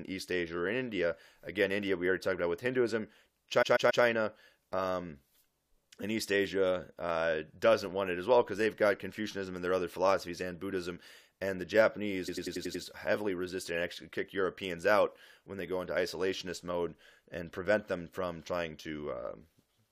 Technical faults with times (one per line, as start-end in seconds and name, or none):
3.61-4.03 repeated frames
12.27-12.83 repeated frames